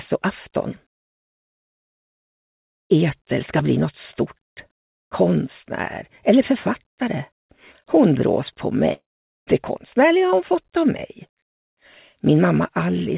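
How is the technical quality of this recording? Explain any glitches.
One glitch stands out, a gap of about half a second near the end, in audio that is band-limited at 4 kHz by the telephone-style G.711 call codec.

From 8.93 s to 9.50 s the sound smears into a fading buzz or hiss, sinks to near silence, then resumes with a piece missing. This is likely a long network dropout: packets stopped arriving, the receiver stretched the last sound until that ran out, and the lost stretch was never played.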